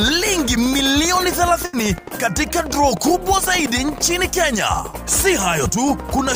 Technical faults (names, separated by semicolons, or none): burst of packet loss